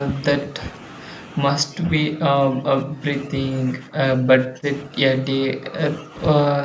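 From 0.45 to 0.58 s, 1.64 to 3.32 s, 3.78 to 6.17 s, and 6.54 s to the end, the speech dips and breaks up. Drops reach about 10 dB, then about 20 dB. This is likely speech suppressed in double talk, with the echo canceller ducking the talker.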